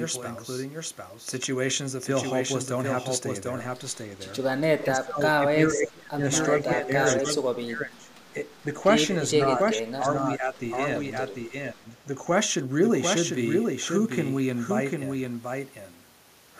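From start to end, the speech is accompanied by a doubled audio track: a second full-band copy trails the original by roughly 0.7 s, sitting around 5 dB lower. The copy carries no reverberant decay or room colouring, so it reads as a clean repeat rather than an echo in a space. The likely cause is the same signal being captured again through a slower path, or an edit leaving two misaligned copies in place.

Speech suppressed in double talk appears at 4.79 to 6.25 s, 6.62 to 6.95 s, 7.2 to 8.1 s, 9.42 to 10.58 s and 11.5 to 11.94 s. In each window the speech is pulled down, by about 30 dB at the deepest in the first, about 10 dB in the second and fifth, about 25 dB in the third and about 20 dB in the fourth. The affected stretches amount to roughly a second, then about 0.3 s, 0.7 s, 0.7 s and 0.3 s. This is likely an echo canceller failing to tell the local talker apart from far-end sound on the loudspeaker, and attenuating both together.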